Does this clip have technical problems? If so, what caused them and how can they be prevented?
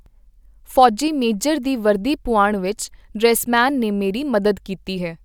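No, nothing in this speech clip points to a technical fault, so there is nothing to trace back or prevent.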